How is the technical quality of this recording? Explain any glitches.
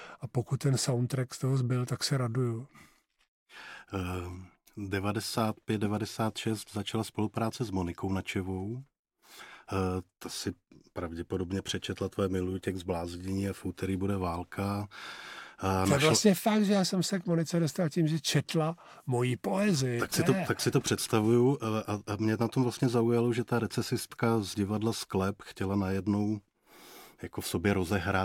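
Listening carefully to the recording, nothing stood out as a technical problem, so there are no glitches to explain.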